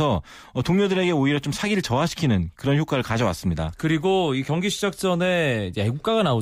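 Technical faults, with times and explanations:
Nothing stood out as a technical fault on listening to this speech recording.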